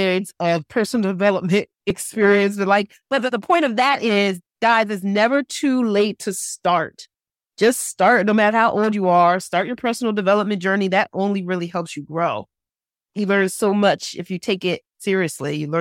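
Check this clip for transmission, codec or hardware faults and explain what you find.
One fault turns up, a dropped buffer (overrun) at 1.90 s. The capture software likely failed to read its samples before the hardware overwrote them, so about 10 ms of speech vanishes and the two sides butt together, heard as a small forward jump in the sound.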